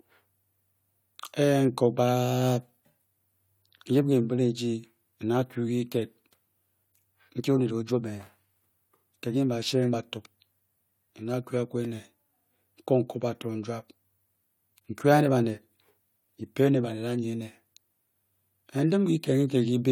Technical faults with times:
none

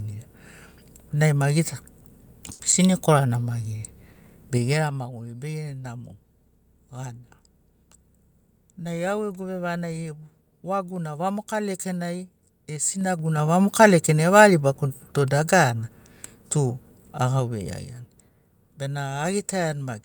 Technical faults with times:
2.52-2.62 short stall from a late packet
4.12-4.19 short stall from a late packet
12.73-13.48 zipper noise

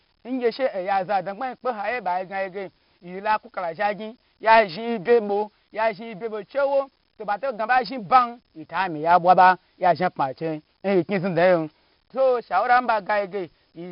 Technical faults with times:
0.00-13.92 4-bit ADPCM compression

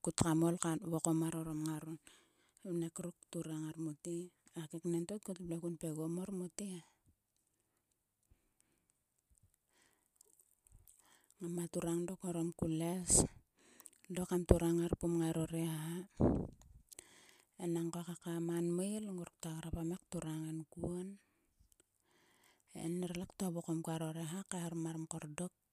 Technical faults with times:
none

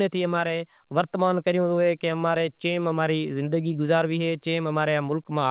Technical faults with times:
0.00-5.51 clock drift between sender and receiver
0.15-5.40 repeated timing corrections

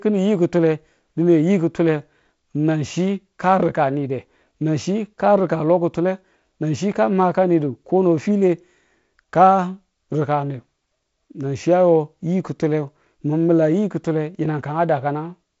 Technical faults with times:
none

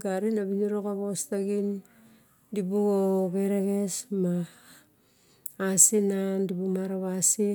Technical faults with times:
none

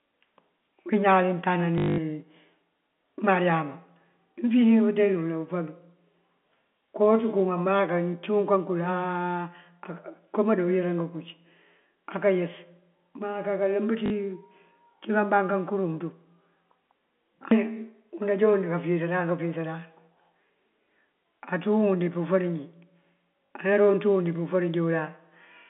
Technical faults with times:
1.78-1.98 packet loss with last packet repeated
14.06-14.10 packet loss with last packet repeated
23.46-23.50 packet loss with last packet repeated

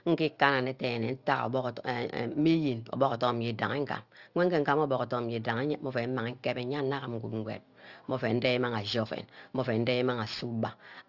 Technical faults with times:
0.00-11.08 aliasing

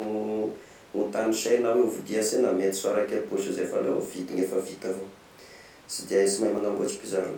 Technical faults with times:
2.29 dropped buffer (overrun)
4.05 dropped buffer (overrun)
6.58 dropped buffer (overrun)

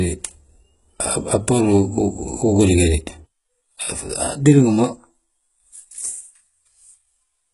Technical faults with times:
0.00-7.53 HE-AAC compression

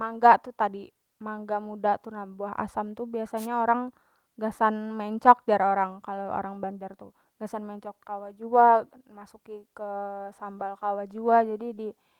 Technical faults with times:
3.36-3.47 wireless microphone noise hit

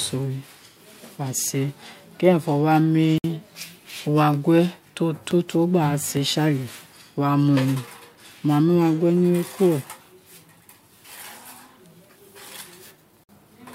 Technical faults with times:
3.18-3.24 gap at a join of encoded pieces
13.24-13.29 gap at a join of encoded pieces

